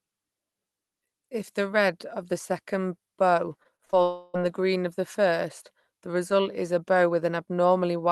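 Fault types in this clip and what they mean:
Repeated packet loss (robotic sound): just after "of the second bow", from 3.63 to 3.95 s, four short holes, the longest 39 ms, get patched by stretching the previous sound, so almost a third of that span comes out choppy and robotic.
Long network dropout: from 4.03 to 4.36 s, just before "the green of the", the sound turns into a smeared, fading continuation rather than silence, likely because about a third of a second of audio never arrived. It picks up again with that part gone.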